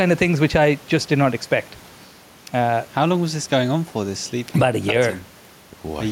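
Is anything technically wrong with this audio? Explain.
Yes, there is gain pumping throughout the speech. The likely cause is input gain set far too high for the microphone, with a fast limiter or compressor clamping down each time the speech gets loud and releasing in the pauses. The level swings by about 5 dB, and the room noise sits about 32 dB below the speech. Loud and soft passages end up squeezed together, giving a flattened, breathing sound.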